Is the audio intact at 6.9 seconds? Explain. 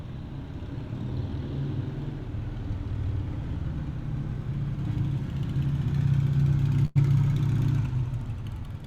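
No. From 6.85 to 6.97 s the audio smears into a held, fading continuation of whatever sound came just before, then jumps ahead, so about 100 ms of the original material never plays. This is a burst of packet loss: a run of consecutive packets arrived too late or not at all, and the receiver filled roughly 99 ms by extending the last good audio while lowering its level before resuming further on.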